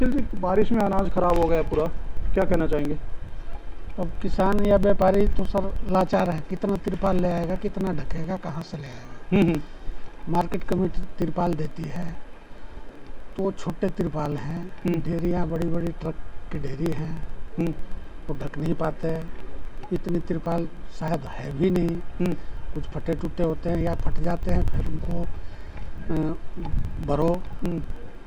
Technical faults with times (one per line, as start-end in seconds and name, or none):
0.06-28.21 periodic USB or driver dropouts